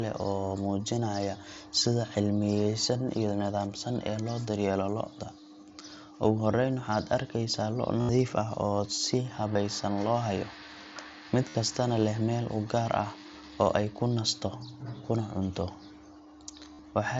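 At 8.01 to 8.09 s, about 75 ms of concealed Bluetooth headset packet loss is heard. Voice packets between headset and phone went missing. The receiver filled each gap by repeating a closely matching slice of the preceding waveform. This gives a steady buzzy tone at full level. A slight warble follows as real speech resumes. A very short loss near 9.54 s, just before "loo hayo", follows. Longer runs recur at 11.49 to 11.55 s, before "kastana leh meel u", and at 16.74 to 16.79 s. Over the mSBC wideband link, the gaps lost 10, 2, 8 and 7 packets in turn.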